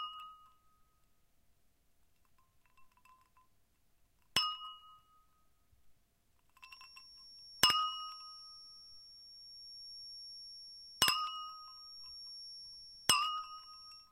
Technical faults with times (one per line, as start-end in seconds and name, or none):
6.57-14.11 feedback whistle